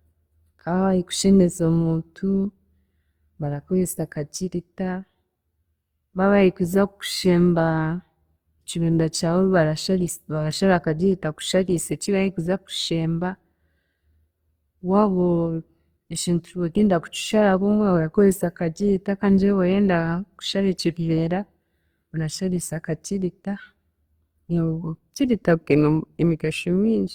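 From start to finish the speech has likely passed through Opus compression in its music-oriented CELT mode, at a bit budget that fits roughly 24 kbps. With too few bits, the encoder preserves each band's energy but refills the fine detail with folded copies of lower bands or with noise. The damage is plainly audible: the voice sounds rough, grainy and noisy in texture, while the bandwidth stays full, reaching up to about 20.1 kHz.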